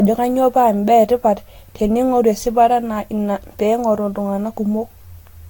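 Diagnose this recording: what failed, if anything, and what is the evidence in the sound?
The codec stage failed, most likely through generation loss. Across the whole speech recording the sound is swirly, smeared and hollow, with blurred attacks and nothing above 19.4 kHz. That is more damage than a single encode at a rate that points to around 70 kbit/s Vorbis would cause. The likely cause is about seven successive decode-and-re-encode passes. Each pass re-quantises on a shifted frame grid, so noise and spectral holes accumulate rather than cancel.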